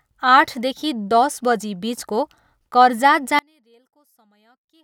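A speech clip in which, from 3.39 s to the end at 4.84 s, the sound collapses by about 36 dB to a faint trace, likely because one channel is inverted and the two cancel when summed to mono.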